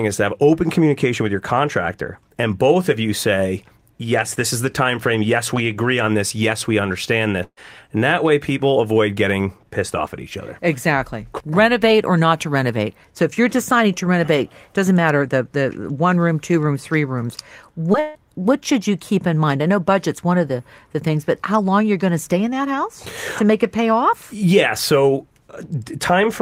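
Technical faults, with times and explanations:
7.43–7.59 s, burst of packet loss: Right after "we understand", about 140 ms of speech goes missing. The receiver stretches the last sound for roughly 130 ms and fades it, followed by about 50 ms of silence. Speech resumes further on.
17.93–17.96 s, short concealed packet loss: Between "two rooms three rooms" and "what should you keep", about 20 ms never arrives. Roughly 10 ms is patched by continuing the preceding sound, then blended back. The result is a brief smear or wobble.
18.00–18.17 s, long network dropout: Just before "what should you keep", about 160 ms of audio is absent. A continued, fading sound fills roughly 150 ms with no silent gap. Then speech returns with that stretch lost. A network outage is the likely cause.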